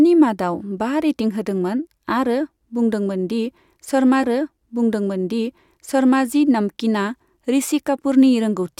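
At 4.22 s the speech jumps back and a stream segment is repeated. About 2.0 s of the talk plays a second time, running until 6.23 s. There is a small blip at the point where it jumps back. The player fetched or queued the same chunk of the stream twice, so it played that stretch again before moving on. The clip grows by that same 2.0 s.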